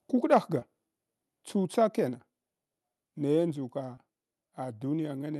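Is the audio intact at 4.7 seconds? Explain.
Yes, at 4.7 seconds the speech plays through intact, with no dropout, click or other fault at that moment.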